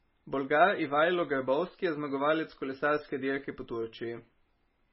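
MP3 compression damage runs throughout this short speech clip, from start to finish. Nothing is heard above 5.6 kHz, so the sibilants and breathy detail are dull and clipped off, and the heavy coding leaves the sound watery and swirly as weak frequency components flicker in and out between frames. The encoder was likely starved of bits, which fits a very low bitrate of under 20 kbps, forcing it to drop the treble and thin the spectrum.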